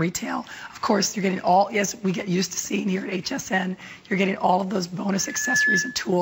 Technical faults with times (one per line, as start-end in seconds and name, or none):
5.19-6.12 loudspeaker feedback squeal